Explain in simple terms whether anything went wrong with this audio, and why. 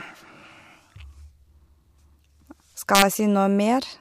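Two things go wrong, both just before the end of this speech clip. From 2.95 to 3.02 s there is integer overflow: the loudest moment went past the biggest number the system could store, and instead of stopping at the top it wrapped around to the opposite extreme. That is why you hear a violent crack rather than the fuzzy flattening of ordinary clipping. Clipping only squashes peaks, while overflow flips them across the whole range.

Then at 3.20 s there is a single sharp click. It is most likely dropped samples, where a tiny sliver of sound, a fraction of a millisecond, went missing and the waveform jumped straight to a later point. Unlike a dropout, nothing audible disappears. The gap is far too short to hear as silence, so you only hear the jolt of the jump.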